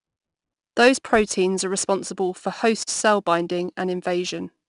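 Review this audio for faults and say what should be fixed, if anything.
The speech was stored with 4-bit ADPCM compression from start to finish. Each sample is coded as a coarse step from a prediction, so the noise tracks the level, plainly audible as gritty hiss on louder passages. Nothing reaches above 10.6 kHz, which fits roughly 89 kbps. To prevent this, record and archive losslessly, and use ADPCM only for a separate delivery copy if it is required.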